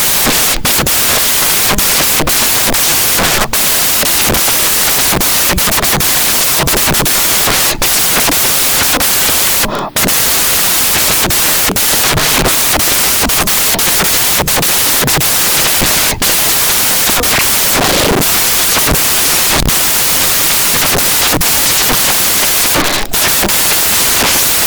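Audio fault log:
Throughout: samples built from the wrong bytes. Each sample's bytes are put together in the wrong order or alignment, so the rapidly changing low bits become the large part of every value. The speech is heard as loud, harsh broadband noise, close to white on louder passages. On a spectrogram, energy is spread flat across all frequencies. The waveform is dense.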